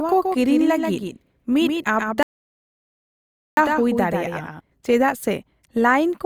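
From the very start of this speech, there's a doubled audio track: a second, flat copy trailing roughly 150 ms behind at about 5 dB down, with no room tail on it. It's likely a slower capture path picking the sound up twice, and it cuts off abruptly at 4.60 s.

At 2.23 s there's a playback stall: the sound just drops out mid-flow and stays silent for 1.34 s, picking up again at 3.57 s. That's likely the player running dry of data or its thread getting blocked until it recovered.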